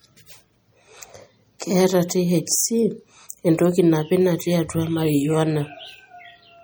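Throughout, the speech sounds watery and swirly. This is MP3 compression, likely at a low bitrate of around 48 kbps. A spectrogram shows flickering holes. At 3.29 s, pre-echo adds about 14 ms of hiss just before a sharp attack. The codec spread the block's noise ahead of that attack, so the waveform shows a smeared, low-level fringe before the onset.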